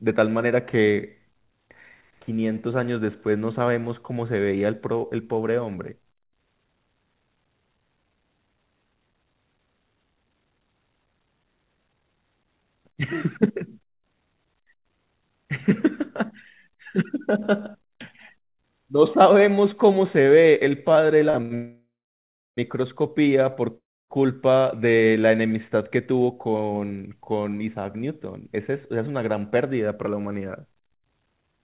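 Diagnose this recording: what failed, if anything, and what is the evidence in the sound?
Two short stalls from late packets sit at 21.30 to 21.36 s and 21.42 to 21.53 s. The speech is held for 39 ms and then 86 ms, heard as a stretched sound with a faint buzz before it resumes exactly where it left off. This is a network and jitter-buffer fault: the buffer ran empty and the receiver extended the last sound. Nothing is lost. Unlike a freeze, it is too brief to decay into silence.

A call audio freeze runs from 21.55 to 22.59 s, inserting about 1 s. The held sound fades, and roughly 670 ms of it is silent. A second, from 23.77 to 24.12 s, adds about 0.33 s, 290 ms of it silent. The speech then continues from the same point, so a gap has been added rather than content dropped. The likely cause is packets held up in the network draining the jitter buffer. The fade to silence is what separates it from the short stalls.

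A jitter buffer speed-up follows. From 26.12 to 29.08 s the speech runs at 110% speed with unchanged pitch, and about 0.3 s is trimmed. From 31.29 s to the end it runs at about double speed, losing roughly 0.4 s. The receiver cut repeated pitch-period slices to shed the delay built up by the freezes. Because pitch is unchanged, this is buffer time-compression, not a resampling or clock fault. The band-limit at 4 kHz fits the G.711 call codec.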